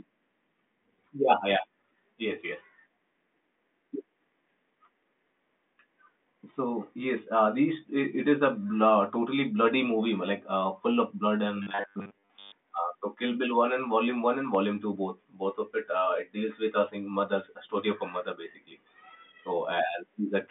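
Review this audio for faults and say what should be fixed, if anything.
From 11.63 to 12.52 s there is robotic sound from repeated short buffers: a metallic 100 Hz buzz, fitting a 10 ms block replayed while most real audio is skipped, likely because audio arrived too seldom. A spectrogram shows flat harmonics every 100 Hz, and the waveform largely repeats one cycle. A larger or adaptive jitter buffer would prevent it.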